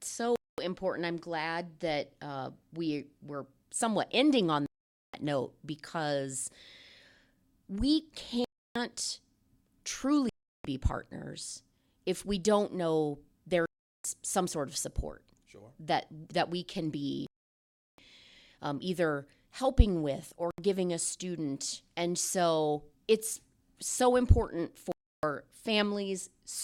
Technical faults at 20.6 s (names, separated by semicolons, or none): Bluetooth stall